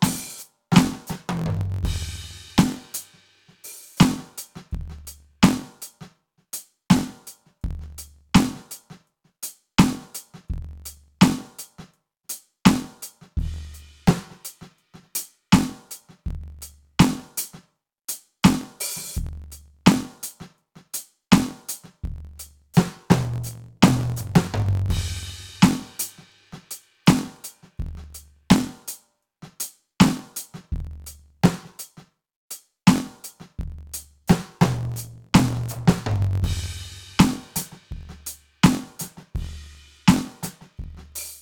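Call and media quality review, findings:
Block size mismatch (truncated), whole music clip. Steady buzz near 45.9 Hz, tempo about 1.07x fast, timbre unchanged. Buffer handoff between stages: writer's blocks, consistent with 1024 samples, are longer than the reader takes, so each block's tail is discarded. Not a clock or resampling error, since those would move pitch with speed. Not random dropouts, since the gaps here fall at a fixed rate.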